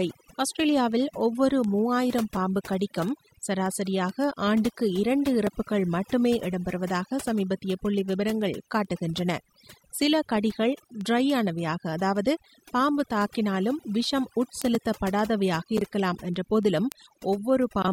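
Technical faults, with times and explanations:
Throughout: overdone noise removal. The noise reduction was set too aggressively, so individual frequency bands near its noise estimate are pulled far down or muted, taking quiet voice detail with them. The background drops and breaks up into twinkling specks.
0.20 to 17.78 s: word clock ticks. A digital link is being received by a device on its own clock, not locked to the sender. Roughly every 0.15 s, about 150 times in all, the clocks slip past each other and one sample is dropped or repeated, producing a steady ticking. That rate points to a clock mismatch of roughly 150 ppm.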